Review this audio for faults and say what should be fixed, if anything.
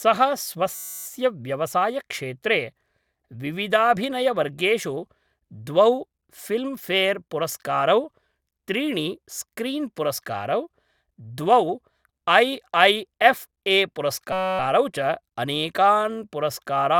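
System hang loop at 0.75–1.06 s and 14.33–14.59 s: a 5.33 ms slice of speech repeats as a steady 188 Hz buzz, which fits a stalled 256-sample ring buffer. Prevent it by fixing the driver or system stall and having the audio path output silence instead of replaying the buffer when new data stops arriving.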